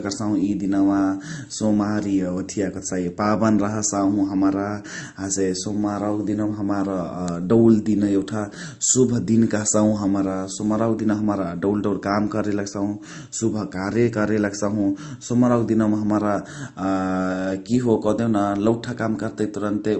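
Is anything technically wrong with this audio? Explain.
Yes. Throughout the speech, the audio was likely passed through more than one lossy codec: the character points to a low-bitrate MP3 stage, around 40 kbit/s, re-encoded as Opus at roughly 32 kbit/s. This is transcoding between lossy codecs. The second encoder spends its limited bits reproducing the first one's artefacts and then adds its own, so the two kinds of coding damage are heard together. Nothing remains above 8.1 kHz, which dulls the top end.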